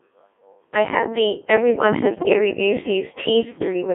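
From the start, the speech passes through a Codec 2 vocoder, and the heavy damage fits a rate near 1.6 kbit/s. The decoder rebuilds the voice from pitch, voicing, energy and a coarse spectral envelope, so the original waveform is gone. It sounds robotic and buzzy, confined to roughly 300 Hz to 3.5 kHz. A spectrogram shows neat, evenly spaced synthetic harmonics with smeared formants and nothing outside that band. The waveform looks unnaturally regular.

From 2.09 to 2.39 s, bit errors on digital voice radio corrupt the stream, consistent with something like one bit in ten flipped across several consecutive frames. Each damaged frame decodes with wrong pitch, level or voicing, so the voice jumps, warbles and bleeps into gibberish. On a spectrogram the harmonic stack lurches up and down in blocky frame-sized steps, and the waveform shows abrupt amplitude jumps at frame boundaries.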